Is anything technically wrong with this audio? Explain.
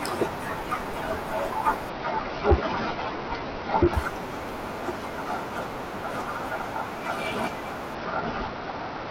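Yes. Twice, from 1.90 to 3.93 s and again from 7.95 s to the end, the speech shows a Bluetooth SBC bit pool drop. The link evidently came under pressure and the encoder cut its bit budget, which fits a fall from a bit pool of 31 to 8, around 66 kbps. Starved of bits, the upper sub-bands get almost nothing and the rest are coarsely quantised, so the treble goes dull and a gritty noise rides on the voice.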